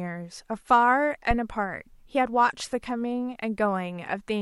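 At 1.31 s a phantom power thump hits the speech. A supply was switched on or off at the live input, and the voltage step passed through the coupling capacitors. It peaks at about -13 dBFS and decays in 14 ms.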